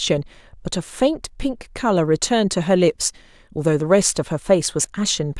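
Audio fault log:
No faults were heard in this speech recording. Nothing in it calls for an entry in the log.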